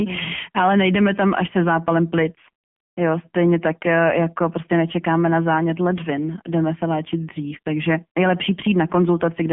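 Speech passed through the AMR narrowband mobile codec throughout: band-limited to 150 Hz to 3.4 kHz with nothing above 3.5 kHz, and heavily buzzy, synthetic, which fits a low 6.7 kbps mode.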